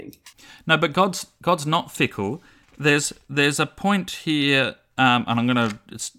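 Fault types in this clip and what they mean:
Nothing stood out on listening to the speech in this recording.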